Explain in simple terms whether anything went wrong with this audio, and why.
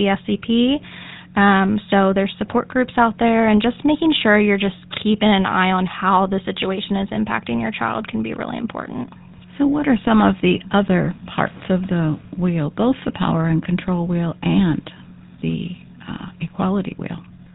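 The speech sounds buzzy and gravelly from start to finish. That is the GSM full-rate codec, an early phone codec. It rebuilds the voice from a rough model driven by spaced pulses, and drops everything above 4 kHz, so the sound is dull and rough.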